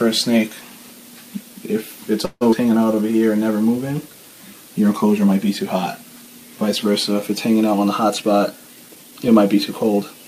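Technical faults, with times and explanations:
2.25–2.43 s: call audio freeze. Playback stalls for about 0.18 s, the last sound carried on as a fading fill with about 30 ms of silence, then resumes where it stopped. Nothing is lost; a gap is inserted, likely from packets held up in transit draining the jitter buffer.
2.51–2.54 s: skip ahead. The audio jumps forward with only a 9 ms join, dropping roughly 70 ms of material, so the two sides butt together almost directly.
2.72–3.20 s: jitter buffer slow-down. The receiver repeated short pitch periods to rebuild its reserve, adding 73 ms. Playback runs at 86% speed with unchanged pitch, giving drawn-out sounds.
8.05–9.98 s: jitter buffer speed-up. With excess audio queued, the receiver removed short pitch-period pieces, roughly 150 ms in total. The passage plays at 108% speed at the same pitch, sounding hurried.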